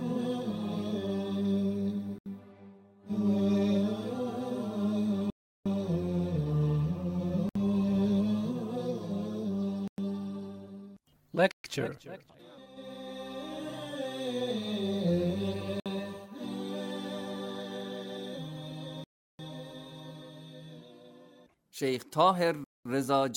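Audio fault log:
2.18 to 22.85 s, Bluetooth stall: the sound drops to silence at 2.18, 5.30, 7.49, 9.88, 11.51, 15.80, 19.04 and 22.64 s, for 58 to 355 ms each, then resumes. Likely radio interference delaying packets until the headphones' buffer ran empty.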